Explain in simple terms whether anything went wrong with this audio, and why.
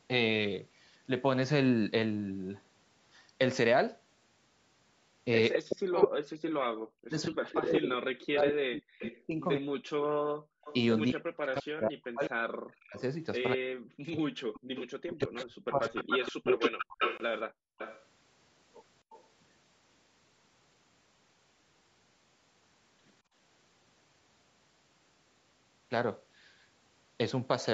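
Several things go wrong in this speech recording, all typical of a phone call with one side on speakerphone and the other on Bluetooth headphones.

Echo leak: From 5.52 to 10.75 s, and again from 12.98 to 19.25 s, a second, delayed copy of the speech trails behind it, nearly as loud as the original. The lag is about a fifth of a second in the first stretch and just over a quarter of a second in the second. The likely cause is a loudspeaker on one end whose sound reached its own microphone. The echo canceller failed to strip that sound out, so it was sent back down the line.

Speech suppressed in double talk: Between 5.57 and 15.99 s, while both sides talk at once, the talker's speech repeatedly sinks, sometimes almost to silence. Altogether about seven seconds are affected. This likely happened because the echo canceller could not tell the live talker apart from the loudspeaker echo. It turned both down together.

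Background gated by the echo canceller: The room sound behind the speech suddenly drops away and then returns. This happens at 10.34 to 10.64 s, 14.60 to 14.73 s, 17.48 to 17.78 s, and more gently at 23.22 to 23.34 s. Each drop lasts only a fraction of a second. The echo canceller clamped the microphone down hard while the loudspeaker was playing. When it let go, the background came back.

Bluetooth stall: At 17.17 to 17.20 s the sound cuts out for a tiny moment of silence and then carries on. This was likely radio interference delaying the wireless packets. The headphones ran out of buffered audio and paused until the missing data arrived.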